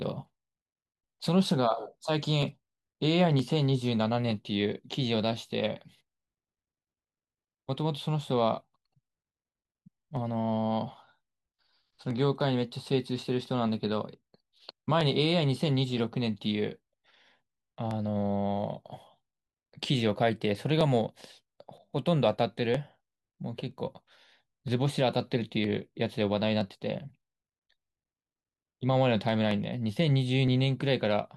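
A speech clip with two clocks likely drifting apart by roughly 700 ppm, causing clock drift buffer slips: a block of about 30 samples dropped or repeated every 0.97 s, heard as a regular click from 0.50 to 30.48 s.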